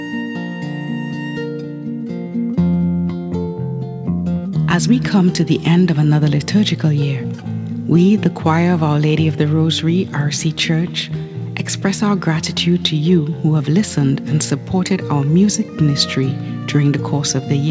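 No technical faults can be heard anywhere in the clip. The audio has come through a working call path, with nothing above 8 kHz, which fits a wideband codec such as G.722 at 64 kbps.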